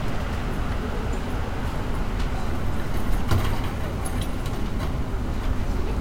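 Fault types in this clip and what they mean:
Nothing stood out on listening to the sound.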